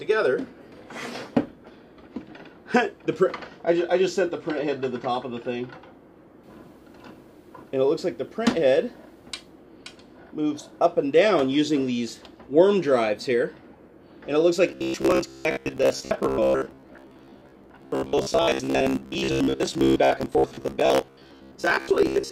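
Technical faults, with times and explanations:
14.69–22.31 s, robotic sound from repeated short buffers: a rigid, metallic buzz at 66.8 Hz, likely from audio arriving late, with about 15 ms chunks looped in place of most of the real sound.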